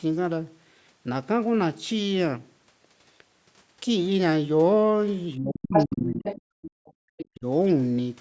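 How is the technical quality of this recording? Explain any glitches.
The recording has real problems in the back half, where both ends of a call seem to be talking at once and the echo canceller struggles. The sound runs through normal call microphone processing, with nothing above 8 kHz.

Speech suppressed in double talk shows up twice. From 5.36 to 6.26 s the talker's level dips hard, by roughly 30 dB at the deepest, for around 0.7 s in total. From 7.27 to 7.46 s it dips again, by roughly 40 dB, for about 0.2 s. The likely cause is the echo canceller failing to tell the local talker apart from the loudspeaker echo while both were active, so it pulled everything down. You hear the voice chopped and sinking in pieces.

The other side's voice leaking through appears in four scraps: 5.71 to 5.86 s, at about the same level as the talker; 6.24 to 6.41 s, about 10 dB down; 6.62 to 6.92 s, about 20 dB down; and 7.17 to 7.26 s, about 15 dB down. 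It's likely loudspeaker playback that the canceller didn't fully remove from the mic. The result is brief fragments of a second voice mixed in, the first one quite prominent.

Background gated by the echo canceller happens from 6.54 to 6.99 s. The room tone drops by about 40 dB, for roughly 0.3 s in total, and then comes back. The canceller clamped the microphone while the far end was playing, so the ambience briefly vanishes into near-silence. It overlaps the third leak, so you get a faint stray voice sitting over a suddenly dead background.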